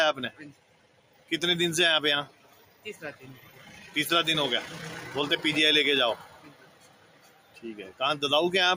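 From start to finish a noise suppressor applied to music or sounds is at work. Built for speech, it mistakes sustained tones and ambience for noise, so its gain swings by around 20 dB and the sound pumps and thins. Unlike dropouts, the sharp onsets mostly survive.

The sound is cut by the noise suppressor at 0.52 to 1.31 s (about 12 dB down), 2.28 to 2.85 s (about 11 dB), 3.14 to 3.95 s (about 8 dB) and 6.19 to 7.64 s (about 12 dB). Held portions and decays sink or end early, while transients mostly come through.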